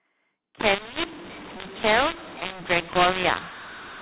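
A mu-law and A-law mix-up runs from 0.60 s to the end: speech coded with mu-law is decoded as A-law. Levels are scrambled, some too loud and others too quiet, so the speech turns harsh and distorted, and pauses fill with noise instead of silence, all within a band topping out near 4 kHz.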